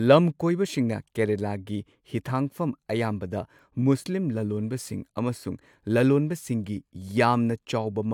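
No technical faults can be heard anywhere in the speech. There is no moment in the recording that calls for a timestamp.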